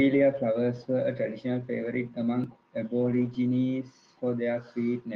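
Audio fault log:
1.85 to 1.87 s, lost packet rebuilt from error correction: just after "flowers were a traditional", a single 20 ms stretch turns briefly rougher and noisier.
3.01 to 3.35 s, lost packet rebuilt from error correction: a longer run, with about 180 ms of rebuilt audio, pointing to several separate losses. In both places the decoder played the low-bitrate backup copy carried in the next packet, so the sound keeps going, only coarser. Unlike plain loss concealment, there is no gap, no repeated or stretched buzz and no fade.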